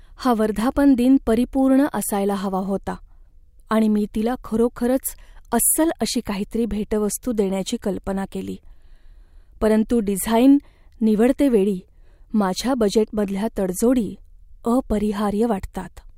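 From 2.34 s to 6.3 s, right after "हा वर्धापनदिन परिपूर्ण असायला", the resampler restarted on every block. Each chunk was converted in isolation, which fits a 44.1 kHz to 48 kHz conversion, so every block edge was computed without its true neighbouring samples. With 20 ms blocks, those edge errors repeat 50 times a second, producing a low buzz that rides on the speech and drops away in pauses. The buzz stops before "काहीतरी भेटवस्तू देण्याची कल्पना".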